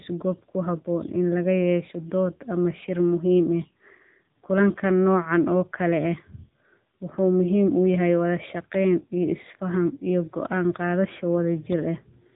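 Speech squeezed through an AMR narrowband mobile codec the whole way: nothing gets past about 3.8 kHz, and the vocal-tract model plus sparse pulse coding leaves it plainly buzzy and synthetic, which fits one of AMR-NB's lower modes, around 8 kbps.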